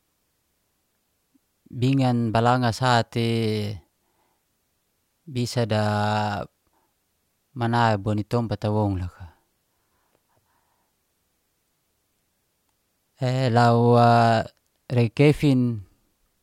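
Nothing in this speech recording points to a technical fault: the signal runs continuously with no audible interruption or damage at any point.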